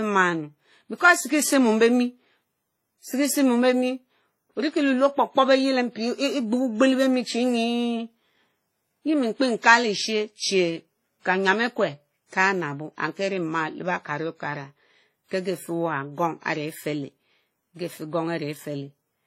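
From start to finish the speech carries two layers of compression damage at once: the artefacts of two different codecs heard together. That points to transcoding between lossy codecs, likely a low-rate WMA encode passed again through HE-AAC, both around 32 kbit/s. A spectrogram shows a hard ceiling at 16.2 kHz, with blotchy, patchwork energy beneath it where each encoder discarded different detail.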